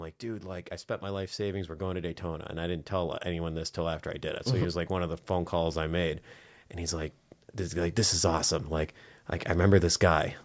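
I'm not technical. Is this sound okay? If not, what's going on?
No. Automatic gain rising happens twice. From 0.2 to 4.09 s, just before "I did it", the call's volume control slowly turns itself up. The voice and background swell together. A smaller rise follows from 6.77 to 8.99 s.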